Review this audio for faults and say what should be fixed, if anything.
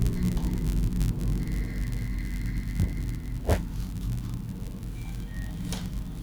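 Block size mismatch (padded) runs throughout: zero-filled gaps in every block produce a steady 91.5 Hz buzz and slow playback to 0.996x at normal pitch, unlike a sample-rate error, which would shift pitch. To prevent this, make the writing and reading stages use the same block size.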